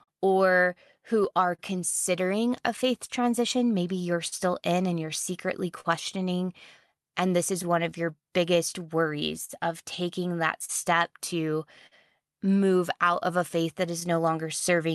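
The sender's clock runs roughly 3 percent slower than the receiver's, so this clock drift between sender and receiver keeps draining the jitter buffer across the whole speech clip. The receiver must stretch and patch the stream to keep playing, and small timing hiccups recur unevenly from start to finish rather than gathering at one point.

From 0.03 to 5.87 s, scattered short gaps appear where about seven packets arrived late or not at all. Each hole was filled by carrying the last sound forward, about 200 ms in all, with the longest patch near 40 ms. These register as brief ticks or smeared syllables against a clear background.

From 1.20 to 14.88 s, repeated timing corrections slow playback to 99 percent. The receiver inserts short repeated pieces, all lengthening, about 100 ms altogether, to cover the slow sender. Each insertion is tiny and unevenly spaced, heard as a faint stumble or a slightly unsteady pace.

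From 7.62 to 14.94 s, a second run of scattered short gaps follows, about ten concealed losses adding up to roughly 200 ms, the longest near 50 ms. Again the last sound is extended over each hole, leaving light clicks and smears through the closing stretch, heard through a call codec whose high frequencies stop at 12 kHz.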